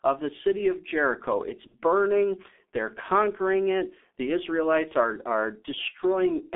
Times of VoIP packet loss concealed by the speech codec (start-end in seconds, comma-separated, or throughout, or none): 1.67-1.76, 4.88-4.94